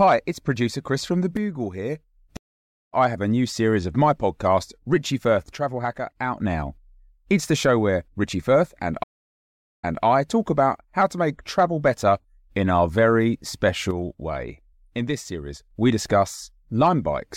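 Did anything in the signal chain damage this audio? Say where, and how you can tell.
Yes. The speech level drops abruptly by about 6 dB and then recovers three times: 1.37–2.03 s, 5.55–6.41 s and 13.91–15.71 s. The drop is a clean step with no change in tone. That points to the likely cause, one channel dropping out before the stereo pair was summed to mono. Each time, only the half of the signal shared by both channels remained. The stage is most plausibly the analogue wiring or a connector feeding one side.

The second fault is a stream reconnect at the network stage. At 2.37–2.94 s the audio goes silent for 553 ms and resumes about half a second further on, so that stretch of speech is lost. At 9.03–10.04 s a 798 ms silence ends with playback picking up 209 ms earlier, so a short piece is heard again. Both times the player lost its connection, restarted its decoder mid-stream and rejoined at a different point.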